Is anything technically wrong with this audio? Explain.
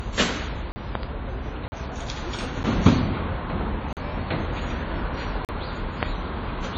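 Yes. WMA compression runs through the whole clip: the audio sounds ringing and washy, with hiss that breathes with the signal and nothing above 8.9 kHz. This likely comes from a low-bitrate transform codec zeroing weak components and smearing quantisation noise.

Blocks of digital silence occur at 0.72, 1.68, 3.93 and 5.45 s, each lasting 40 ms, plus a briefer 8 ms one at 2.63 s. Samples were replaced by zeros, probably from an unfilled output buffer, so the sound drops abruptly into short holes, the briefest heard more as a tick or dip.

Loud pops appear as a pair between 0.95 and 1.05 s, about 15 dB above the signal, and as a single pop at 6.03 s, about 20 dB above it. A sudden voltage pulse, likely from a switch, static or a driver glitch, sits sharply on top while the sound continues underneath.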